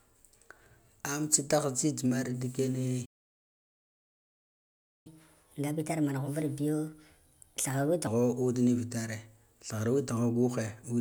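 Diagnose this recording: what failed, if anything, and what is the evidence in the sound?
Playback stall, 3.05 to 5.07 s: right after "mar ndi" the speech cuts to silence for about two seconds and then resumes. At the playback stage, the player likely ran out of buffered data or had its output thread blocked, so nothing reached the output until it recovered.

Catch-up at higher speed, 5.07 to 8.07 s: once the speech returns, it runs at 1.25 times normal speed with pitch raised by roughly four semitones. The player resampled its backlog to recover the lost time, then dropped back to normal rate at 8.07 s.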